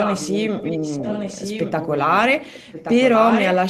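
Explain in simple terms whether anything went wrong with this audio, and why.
Something did go wrong. From the start until about 3.65 s, a quieter second copy of the speech trails the original by about 1.1 seconds. This is an echo leak, most likely from one side playing the call on a loudspeaker while its echo canceller failed to remove that sound from its microphone. A room's reverberation blurs sound immediately. This copy arrives a clear second late and repeats the speech.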